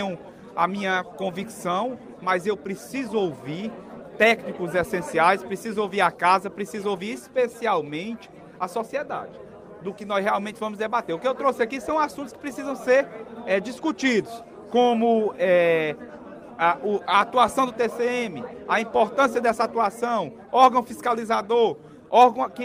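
Nothing is technically wrong with the audio in this clip.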